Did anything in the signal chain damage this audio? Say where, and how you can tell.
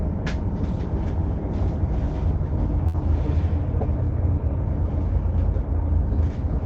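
Yes: a short stall from a late packet in the jitter buffer, 2.87–2.96 s. The sound is stretched by 61 ms with nothing lost, leaving a smeared, held band on the spectrogram.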